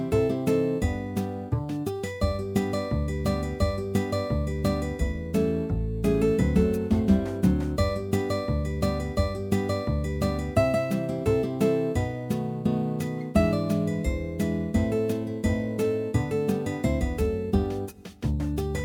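Throughout the sound there is a gritty, inharmonic fizz riding on loud and high passages, the mark of crude rate conversion. Samples were repeated by nearest-neighbour picking with no filtering, which fits a 44.1 kHz to 48 kHz change. The resulting error sits roughly 30 dB below the signal. Unlike clipping, its tones bear no harmonic relation to the material.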